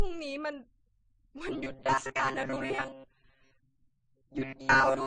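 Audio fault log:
throughout: transcoding between lossy codecs. The speech was likely encoded by one lossy codec and then re-encoded by another, the pattern fitting a low-bitrate MP3 stage (around 36 kbit/s) followed by AAC-LC at around 32 kbit/s. The second encoder spends its scarce bits reproducing the first one's artefacts, then adds its own. Both sets are heard together, and the lower band limit survives, so nothing remains above 9.7 kHz.
1.48 to 5.07 s: robotic sound from repeated short buffers. Fresh audio likely stopped arriving often enough, and playback filled the gaps by looping the most recent short block, with roughly 70% of the signal being repeats rather than real speech. The loop rate imposes a fixed buzz at 134 Hz, which fits a block of about 7.5 ms. The speech becomes a rigid, metallic drone that only loosely follows the original syllables until the end of the clip.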